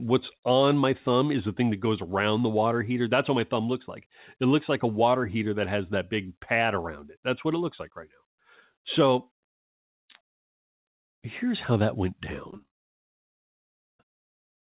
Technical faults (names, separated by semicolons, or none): repeated packet loss (robotic sound); long network dropout